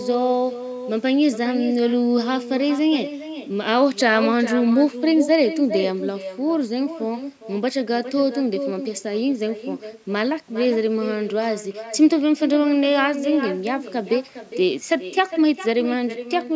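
A speech clip with an echo with no canceller running through its whole length: every phrase returns around 0.4 s later as a copy about 11 dB quieter and thinner. The far end's loudspeaker is feeding its microphone and nothing removes that path. On a waveform, each burst of energy has a smaller twin trailing it; on a spectrogram, every syllable's pattern reappears shifted right and fainter, topping out at 8 kHz like the call-processed speech.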